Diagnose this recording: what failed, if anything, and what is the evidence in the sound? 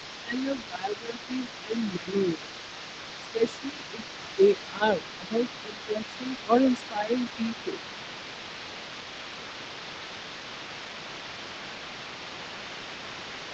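Call processing, echo cancellation stage: the other side's voice leaking through runs the whole clip, a second talker sitting roughly 15 dB under the main speech. The likely cause is an echo canceller leaving far-end loudspeaker pickup in the microphone path. On a spectrogram, a faint second set of harmonics overlaps the main one.

Call processing, same stage: speech suppressed in double talk at 0.22–2.53 s, 3.33–4.0 s and 4.36–7.83 s. The near talker dips by up to about 15 dB in the first span and about 10 dB later, for roughly two seconds, under half a second and a second and a half. The likely cause is a canceller unable to separate talker from echo, attenuating both. The waveform envelope shows dipped stretches, and on a spectrogram the band already ends at 8 kHz.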